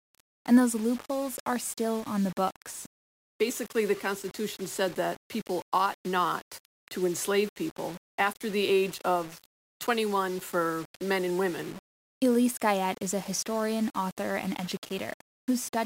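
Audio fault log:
Throughout, low bit depth without dither: the speech carries a grainy, buzzing distortion that shifts with the sound itself, roughening quiet passages and making the softest moments sputter or cut to silence between level steps. The grit sits roughly 20 dB below the signal, which fits rounding to about 6 bits. It is likely undithered requantisation: with no added noise to decorrelate it, the rounding error tracks the waveform instead of forming a steady hiss.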